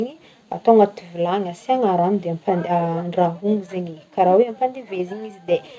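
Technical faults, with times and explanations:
No technical faults can be heard in this speech clip.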